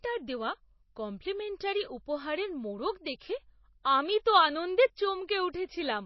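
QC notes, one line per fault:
Throughout, MP3 compression, likely at a bitrate around 24 kbps: nothing sits above 5.8 kHz, so sibilants sound dull, and weak frequency lines switching on and off make speech watery and swirly. A spectrogram shows a flat ceiling at 5.8 kHz with speckled, flickering gaps below it.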